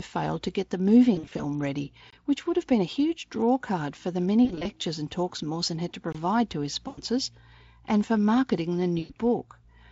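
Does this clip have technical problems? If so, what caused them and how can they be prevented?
Yes, two kinds of fault show up in this speech clip.

The first is VoIP packet loss concealed by the speech codec, at 1.15–1.46 s, 4.45–4.68 s, 6.87–7.01 s and 8.99–9.16 s. Packets went missing, roughly 140 ms of audio in the first burst and 100 ms in each of the others, with runs up to 40 ms long, which fits 20 ms frames. The Speex decoder guesses its way through by stretching the last sound it had and fading it out, so you hear a buzzy, smeared patch that stays a bit weak until it recovers. A jitter buffer with some headroom, or forward error correction on the link, would prevent this.

The second is a gap between chunks, at 2.10–2.13 s and 6.13–6.15 s. Each one is a clean hole of about 21 ms with hard edges, and the two sit 4 s apart. That points to audio handled in 4-second blocks, where the player or encoder leaves silence at each join instead of butting the blocks together. 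Nothing is actually lost, but the sound gets chopped at each seam. Gapless playback, or trimming the codec padding at chunk boundaries, would fix it.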